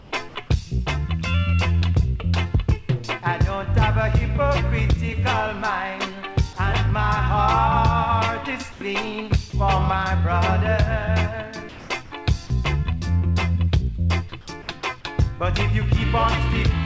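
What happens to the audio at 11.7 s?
From 11.69 to 11.9 s, about 210 ms, the quiet background, sitting about 21 dB below the loud passages, turns into a flat, featureless hiss about 2 dB quieter. This is likely comfort noise in place of the background: the sender paused transmission during the lull and the receiver filled the gap with synthetic noise. On a spectrogram the textured background becomes an even, smooth wash, still ending at 8 kHz like the rest of the call audio. On the waveform the level dips slightly and looks uniform.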